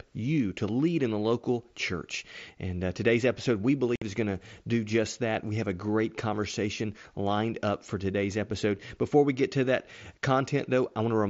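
Unconcealed Bluetooth headset packet loss hits this speech clip from 3.96 to 4.02 s, right after "uh today's episode we" and before "is going to do". For about 60 ms, a run of consecutive voice packets between the headset and the phone went missing, and nothing was generated to cover them. The result is a sudden hole with abrupt edges that can click as the sound cuts out and snaps back. The link carries audio through the wideband mSBC headset codec, which adds a light graininess on louder syllables.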